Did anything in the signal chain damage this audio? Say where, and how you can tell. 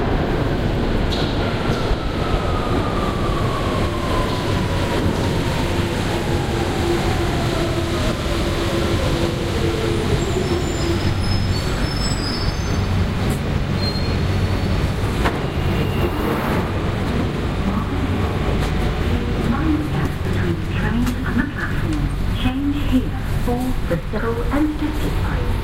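Yes. The damage sits at the codec stage, in the compressed data: there is damaged data in a compressed stream at 15.03 s, 20.25 s and 24.17 s. Each event is a very short disruption in the sound, under 20 ms long. At those points some bytes of the encoded stream were corrupted, so the decoder misread or rejected the affected frame, lost sync and had to search for the next valid frame header before output resumed.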